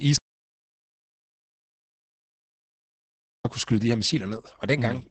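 Opus voice compression runs through the whole speech clip. A low-rate SILK coding, consistent with roughly 10 kbps in 20 ms frames, cuts everything above 8.7 kHz and quantises the excitation coarsely, so the speech sounds heavily muffled, hoarse and faintly robotic.

An audio dropout to silence runs from 0.17 s to 3.45 s, removing about 3.28 s of audio. The sound cuts off abruptly into silence with no room tone and then resumes mid-flow, likely because the input was lost while recording continued.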